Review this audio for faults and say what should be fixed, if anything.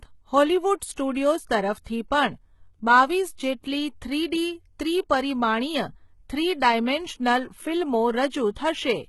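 The whole recording sounds heavily coded, with gritty, metallic sibilants and nothing above 11.8 kHz. Likely HE-AAC compression, rebuilding treble by band replication at a bitrate near 16 kbps.

Pre-echo smears hiss ahead of attacks at 0.92–0.98 s and 1.84–1.86 s, before "પણ બાવીસ". Block-spread quantisation noise leaks into the quiet moment before each onset.

Encode at a higher bitrate with plain AAC and shorter transform blocks on transients to prevent both.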